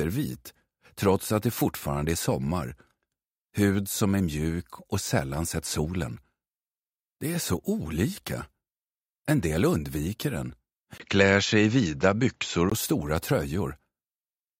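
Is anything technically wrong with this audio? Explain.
Yes. From 10.98 to 12.72 s the sound turns dull, with nothing above 7.6 kHz, a 20 ms gap and faint added noise: likely an input switched to a poorer, narrower-band device.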